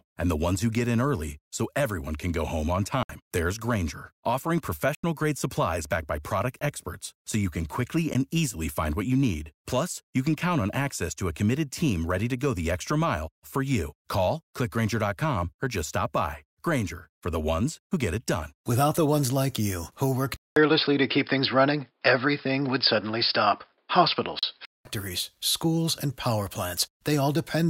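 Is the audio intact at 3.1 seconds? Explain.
No. Right after "can go home on", a block of digital silence runs from 3.03 to 3.09 s, 64 ms of samples replaced by zeros. The sound cuts off and returns with no fade, leaving a short hole, unlike a fading dropout.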